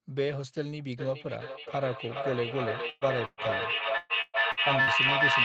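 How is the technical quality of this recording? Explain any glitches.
The recording has serious technical problems: a strong echo loop covers most of the clip, and there are several packet-loss dropouts. The audio stops at 8 kHz, which points to a wideband call codec.

Feedback echo between two devices, from 0.97 s to the end: a second device in the room plays the call back into the microphone, and neither echo canceller removes it. The speech returns roughly every 0.4 s. At its loudest it reaches about 5 dB above the direct speech, so repeats build up rather than decay.

Burst of packet loss, at 2.89–3.04 s and 3.25–3.40 s: each time about 120 ms of audio never arrived. The receiver extended the last sound for that span, producing a brief held buzz or hiss that fades out. Playback then resumes with that slice of speech missing.

Repeated packet loss (robotic sound), from 3.97 to 4.90 s: four separate gaps, the longest 122 ms, together make up about 39% of the stretch. 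Each gap is patched with continued sound before the next one hits, so this section turns choppy, with pieces missing.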